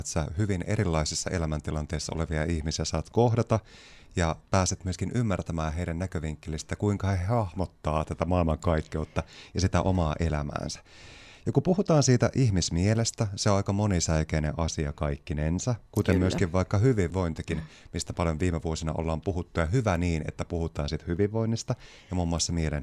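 Listening to the speech here, nothing stood out as a technical fault at any point.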